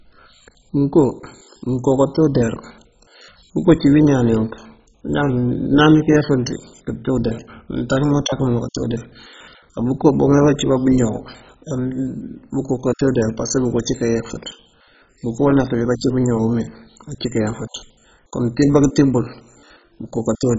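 Throughout, the speech sounds dull and gurgling, with granular distortion, likely from heavy MP2 compression at a very low bitrate; a spectrogram shows nothing above 7.5 kHz and flickering upper bands.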